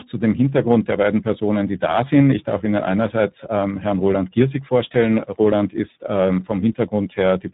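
From start to finish the speech sounds rough, noisy, muffled and warbly, with nothing above 3.8 kHz. This is tandem speech coding: the signal passed through a chain of coders (CVSD at 64 kbit/s, G.711 mu-law at 64 kbit/s, then iLBC at 15.2 kbit/s), being decoded and re-encoded at each border. Every stage coded the previous stage's already degraded output, so the damage stacked, and iLBC's model-based coding adds the muffling and warble.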